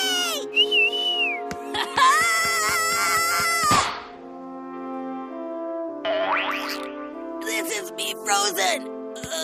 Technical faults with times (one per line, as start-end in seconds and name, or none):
none